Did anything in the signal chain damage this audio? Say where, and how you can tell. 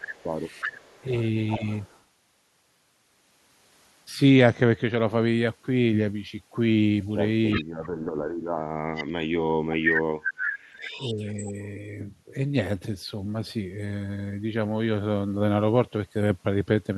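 Yes. Call processing likely suppressed speech in double talk: the voice ducks at 0–0.22 s and 1.58 s, then sinks by about 40 dB across 7.59–11.54 s.

Echo leak, likely from a loudspeaker-side canceller, returns a copy delayed 368 ms, heard at 0.17–2.02, 7.5, 8.95, 9.91 and 10.76–11.66 s.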